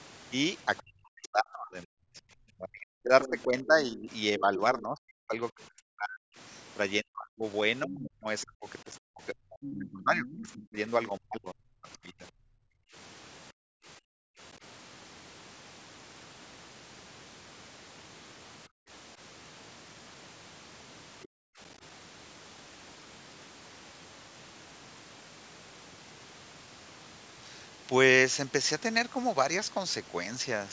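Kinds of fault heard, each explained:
Other side's voice leaking through: a faint second voice, roughly 15 to 25 dB under the talker, at 0.8, 3.2–3.4, 7.9–10.5 and 21.2 s, likely leftover loudspeaker echo; it shows as weak extra spectrogram traces.
Speech suppressed in double talk: between 0.8 and 12.2 s the voice repeatedly sinks, by as much as about 40 dB over roughly seven seconds. The waveform shows gouged gaps, likely echo-canceller ducking.
Background gated by the echo canceller: the canceller clamps the microphone, so room sound drops about 40 dB at 12.5–14.4, 18.7–18.9 and 21.3–21.6 s. The spectrogram shows dimmed patches.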